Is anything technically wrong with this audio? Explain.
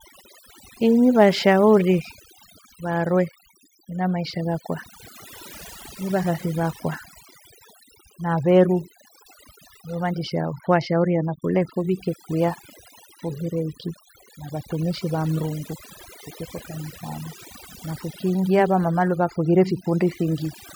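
Yes. Overdone noise removal runs throughout this speech clip: a noise reducer set too strong pushes frequency bands down whenever they approach its noise estimate, taking quiet speech detail with them, so the background drops and breaks up into twinkling specks.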